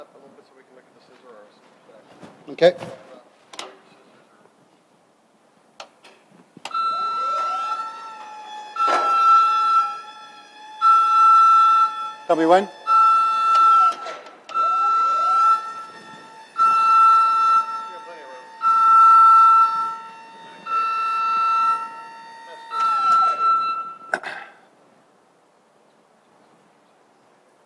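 No dropouts, clicks, distortion, level jumps or timing errors turn up anywhere in the recording.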